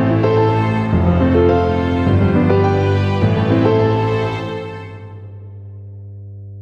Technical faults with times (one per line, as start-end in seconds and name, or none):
0.00-6.61 mains hum